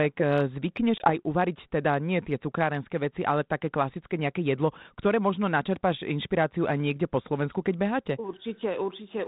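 At 0.98 s the speech drops into a hard-edged silent hole, packet loss on an ADPCM call, with about one 20 ms packet missing. Unlike a plain dropout, the 32 kbit/s G.726 decoder's predictor and step size lose sync, so recovery runs to 1.11 s with the speech slightly distorted.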